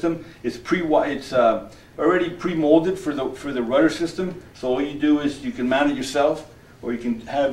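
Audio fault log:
Nothing here stands out as a technical fault; the audio holds together without any glitch or problem worth logging.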